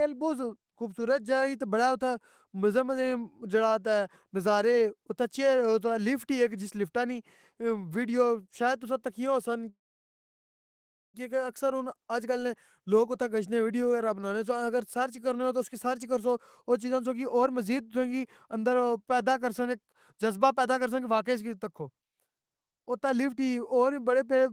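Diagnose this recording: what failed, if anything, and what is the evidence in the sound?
Call audio freeze at 9.69 to 11.16 s, just after "شاید تُساں تکیاں ہوسن": the speech halts and about 1.4 s of filler is inserted, almost all of it silence. It then resumes exactly where it stopped, with nothing lost. This is a network-stage problem, likely delayed packets that let the jitter buffer run dry.

Jitter buffer speed-up at 17.04 to 18.55 s (after "کرسواو چیزاں", before "پیدا کرسن جذبہ", 108%), 20.53 to 23.37 s (110%), and 24.31 s to the end (after "ای اور وی بڑے", 114%). The buffer trims repeated pitch-period slices, roughly a few hundred milliseconds in total, so speech sounds hurried without a change in pitch.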